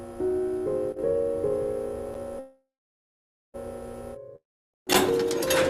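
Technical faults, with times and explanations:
2.39–3.56 s, call audio freeze: the last sound stretches into a fading buzz, then about 0.86 s of silence, and the audio picks up exactly where it stopped, nothing skipped, so everything after runs about 1.14 s late. Likely cause: delayed packets emptied the jitter buffer.
4.36–4.76 s, long network dropout: a brief fading buzz gives way to about 0.31 s of silence, and the audio returns further along, with roughly 0.38 s gone for good. This likely comes from packets that never arrived, leaving the receiver nothing to play.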